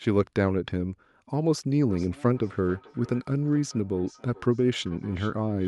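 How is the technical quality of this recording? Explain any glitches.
The recording has one clear fault, feedback echo between two devices. From 1.89 s to the end, the speech returns at a fixed gap of roughly 400 ms, peaking about 24 dB below the voice. One device replays the other's microphone signal, which gets picked up again. Unlike room reverberation, these are distinct delayed copies, not a smooth tail.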